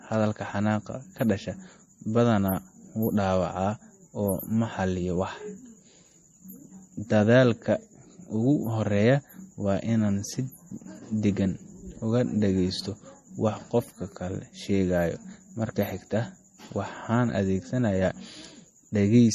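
From start to finish the speech carries MP3 compression damage that's plainly audible: a watery, swirly quality with metallic chirps on the s sounds, and consonant attacks that smear. Nothing comes through above 15.1 kHz. That's the encoder running short of bits, likely at something around 40 kbps, chopping the treble at a fixed point and dropping quieter frequency lines that blink on and off from frame to frame.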